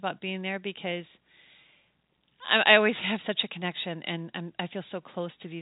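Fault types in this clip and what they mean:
No faults can be heard in this speech recording.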